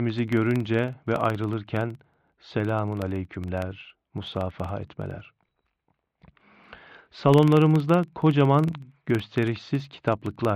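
Speech runs through the whole clip with a steady 21.5 Hz buzz from a filter restarted on every block, which fits 2048-sample blocks; a spectrogram shows evenly spaced vertical stripes about 46 ms apart, stronger where speech is louder.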